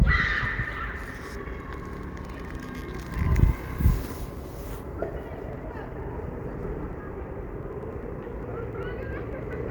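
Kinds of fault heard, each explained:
Periodic USB or driver dropouts: something on the system stalls the USB bus or audio driver every 0.1 s, skipping a sliver of audio, about a tenth of a millisecond each time, so regular ticks run through the sound from 4.13 s to 9.63 s.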